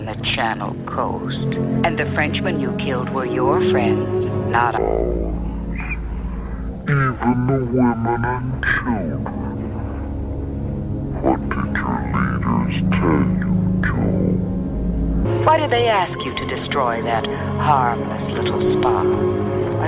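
From 4.78 to 15.25 s there is a wrong sample rate fault. Audio recorded at 16 kHz plays back at 8 kHz. It runs at half speed and sounds a full octave lower.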